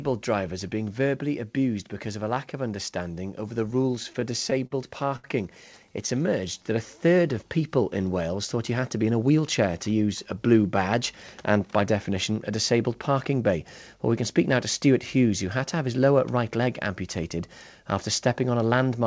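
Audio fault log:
3.71–4.74 s, repeated stalls (stutter): nine brief gaps, the longest 48 ms and 123 ms in total, about 12% of the span. Late packets repeatedly drained the jitter buffer, and each time the receiver extended the last sound until data resumed. Almost nothing is lost, but the passage drags and stutters.
5.16–5.27 s, short stall from a late packet: one packet arrived after its playout time, so the jitter buffer ran dry and the receiver held the preceding sound for 74 ms before resuming at the same point. Nothing is skipped, but that sound lingers audibly, and playout runs 74 ms later from here.
5.92–6.74 s, jitter buffer slow-down: playback runs at 94% speed with pitch unchanged, adding 57 ms. With its reserve low, the receiver repeated single pitch periods or pause fragments many times in succession, so sounds are drawn out and slightly sluggish.
8.98–9.39 s, jitter buffer speed-up: playback runs at 113% speed at the original pitch, with about 70 ms cut. 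The buffer held more than its target, so the receiver removed short slices of one or a few pitch periods in a row, giving a hurried, compressed stretch.
throughout, WebRTC call path: band-limiting to 8 kHz fits G.722 at 64 kbps.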